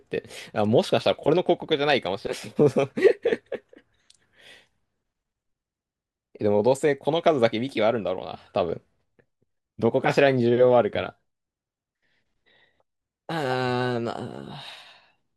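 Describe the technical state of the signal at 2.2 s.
A 100 Hz buzz runs through the speech from 1.86 to 2.76 s, with no audible speed-up. It comes from a block size mismatch (truncated), which discards each block's tail 100 times per second.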